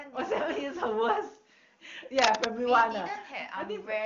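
From 2.18 to 2.45 s, dense, uneven crackling rides over the speech at about the same loudness as the voice: cable scratch noise, likely from a worn lead or connector whose contact flickered as it moved. Unlike a single click or dropout, it's a rapid rustling cluster lasting about a quarter second.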